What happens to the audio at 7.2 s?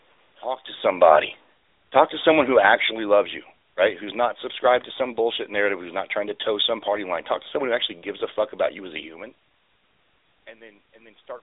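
At 7.2 s the speech is still carried through the AMR narrowband mobile codec, which spans the whole clip. The codec models the vocal tract with a pitch predictor and a few pulses per 5 ms frame, leaving plainly audible coding damage. The audible band runs from roughly 300 Hz to 3.7 kHz, with nothing above 3.8 kHz, and the sound fits a mode near 10.2 kbps.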